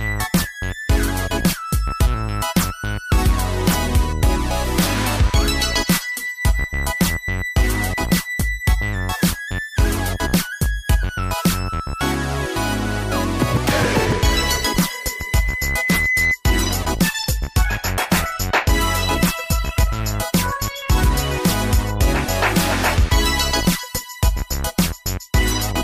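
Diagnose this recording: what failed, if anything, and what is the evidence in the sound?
A steady whistle at 2 kHz appears at 14.44 s and swells over roughly two seconds until it sits about level with the rest of the sound, then stops at 16.37 s. This is loudspeaker feedback squeal, an acoustic loop at the capture end: the microphone was picking up a loudspeaker it was feeding, and at 2 kHz the loop gain rose above one, so that tone kept reinforcing itself until the loop was broken.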